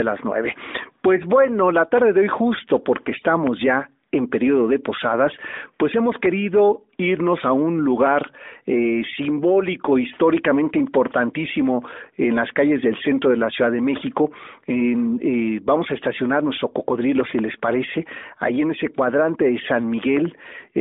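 Listening to this speech recording, carried over what sounds like a narrowband mobile line, nothing stood out as a technical problem.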